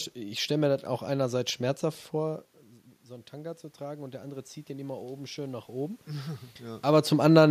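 From 3.06 s to 6.88 s there is automatic gain rising. The input fell by about 13 dB, and the gain control responded by slowly adding about 7 dB of gain over nearly four seconds. What gives it away is that the room noise swells upward along with the speech. When the talker shifts position around 2 s, only the voice level changes and the background stays steady; the talker shifts again near 6.5 s.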